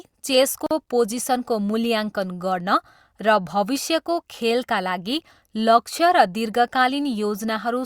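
Separately encoded pieces of this speech were joined untrimmed, leaving a gap at a join of encoded pieces: a gap of about 44 ms from 0.66 to 0.71 s, with smeared edges.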